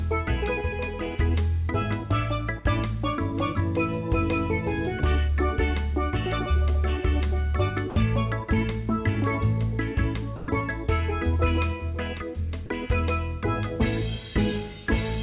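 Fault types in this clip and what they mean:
Sound dropped by the voice detector: at 7.9, 10.36 and 12.66 s the sound briefly gives way to steady noise for 40 to 120 ms, likely the sender's detector mistaking it for background.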